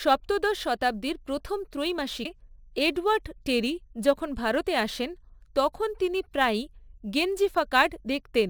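Sample clock jitter runs through the whole speech clip. The converter's clock wanders by a few microseconds, so each sample lands slightly off time. Steep, fast parts of the waveform suffer most. The result is a faint hiss, roughly 30 dB below the signal, riding on louder and brighter sounds.

At 2.24 s there is damaged data in a compressed stream. A short stretch of the encoded stream is corrupted, and the decoder misreads it before finding the next frame header. It comes through as a brief chirp or blip.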